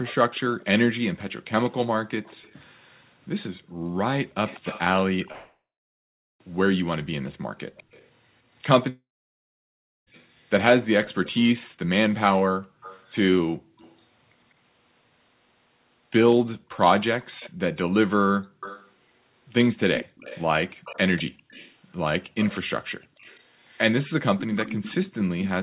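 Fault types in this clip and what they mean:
Echo leak: A faint copy of the speech trails it by about 196 ms, running through the whole clip from 0.04 s. It sits around 15 dB below the direct speech. A loudspeaker at the far end likely fed its own microphone, and that echo canceller let this through.
Background gated by the echo canceller: Between 3.58 s and 23.21 s the room sound dips while the canceller clamps the microphone. The deepest drop is about 40 dB. The affected time adds up to roughly two seconds, and the background returns each time.
Long network dropout: The audio breaks off twice, at 5.32 to 6.41 s and 8.89 to 10.08 s, likely from lost packets. Each time a fading buzz carries on briefly, then silence follows, for 0.79 s and 1.04 s. About 1.1 s and 1.2 s are gone.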